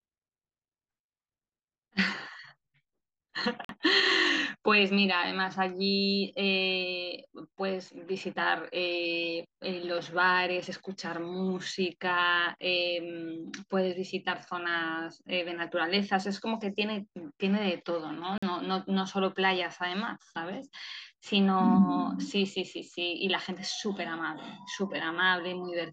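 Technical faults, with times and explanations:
3.65 s and 18.38 s: block of digital silence, 46 ms each. The speech cuts abruptly to silence and back with no fade, which fits an unfilled 2048-sample buffer.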